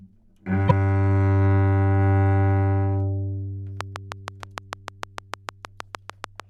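Broken MP3 bit reservoir, 0.66 to 0.71 s: after frames were likely cut out, the next ones borrow the wrong bytes, so the sound jumps ahead with a garbled glitch lasting about two 24 ms frames.

Train of clicks, 3.81 to 6.41 s: some twenty similar clicks tick at a regular 6.56 per second, peaking about 15 dB above the sound, likely from interference or a faulty connection.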